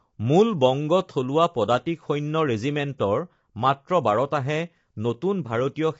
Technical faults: low-delay AAC compression

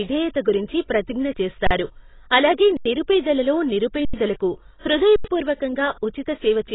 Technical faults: AAC compression; underrun with held sample

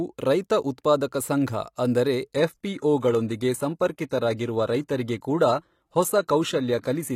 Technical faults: adaptive stream at a lower bitrate

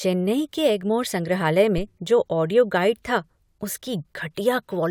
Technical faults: phantom power thump

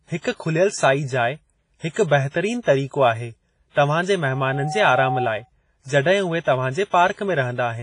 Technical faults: WMA compression; pre-echo; loudspeaker feedback squeal

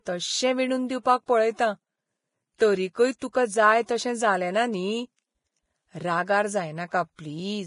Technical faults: Vorbis compression; pre-echo

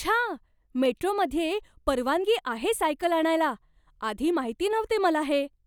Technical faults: dropped samples

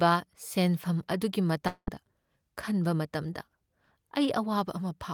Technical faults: long network dropout

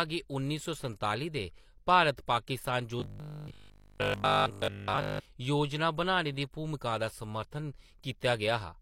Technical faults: robotic sound from repeated short buffers

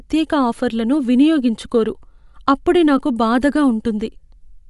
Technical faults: Bluetooth LC3 compression

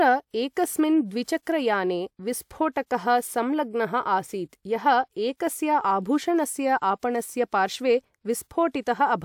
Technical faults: none

